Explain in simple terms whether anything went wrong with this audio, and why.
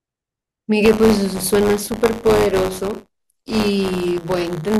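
From 0.84 s to the end, the speech carries a robotic buzz. This is buffer tearing. The playback buffer slipped out of step, so a small slice of each 10 ms block replays audio about 20 ms old. Those hard joins repeat 100 times a second.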